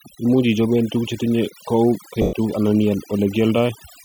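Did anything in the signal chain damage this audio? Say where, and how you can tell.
Yes. At the call-processing stage, overdone noise removal runs through the whole clip. The suppressor is set so hard that bands near its noise estimate are pulled down or gated out. The background collapses into near silence with twinkling specks.

At the Bluetooth link, there are lost LE Audio frames from 2.22 to 2.33 s, a gap of about 110 ms that fits roughly eleven 10 ms frames. The LC3 decoder fills the hole by reusing the last spectrum with scrambled signs and fading it, so the speech smears into noise and sinks away.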